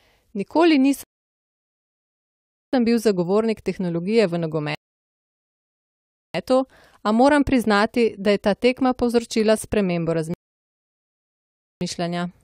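The speech hits three rebuffering stalls: 1.03 to 2.73 s, resuming on "bil zagovornik", then 4.75 to 6.34 s and 10.34 to 11.81 s. Each time the player runs dry, drops to silence, then picks up exactly where it stopped, adding roughly 1.5 to 1.7 s.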